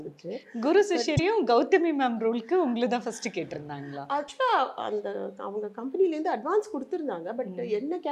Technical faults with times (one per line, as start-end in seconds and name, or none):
1.16-1.19 broken MP3 bit reservoir
4.27-4.30 broken MP3 bit reservoir